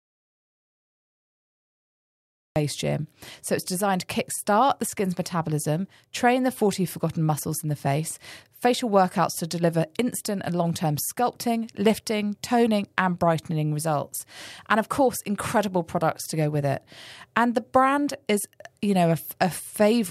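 From the very start until 2.56 s the speech is replaced by an audio dropout to silence: plain silence with no room tone at all, before the sound cuts in mid-flow. The input was likely lost through a disconnected device, failed link or mute, while recording continued.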